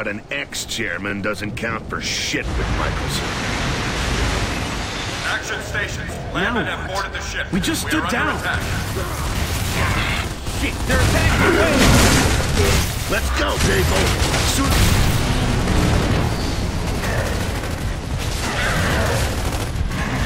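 A brief stutter, like a small click, catches the sound at 1.10 s and again at 13.73 s, where about 25 ms plays twice. These are overlapping chunks: the audio was handled in 2.5 s blocks, and each block began before the previous one ended.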